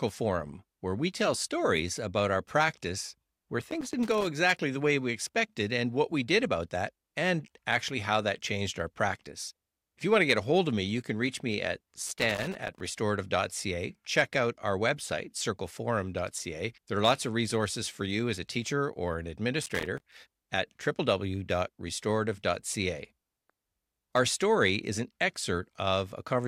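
Loose connector crackle hits the speech at 3.61–4.27 s, after "about our practice where", at 12.07–12.80 s, after "can reach me at", and at 19.63–20.14 s, after "a teacher or an". A dirty contact repeatedly breaks the signal, producing irregular bursts of scratchy crackle.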